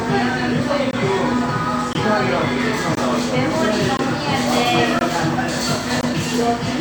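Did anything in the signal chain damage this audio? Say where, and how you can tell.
Yes: a gap between chunks, where each 1 s chunk is followed by 20 ms of silence, leaves hard-edged silent holes at 0.91, 1.93, 2.95, 3.97, 4.99 and 6.01 s.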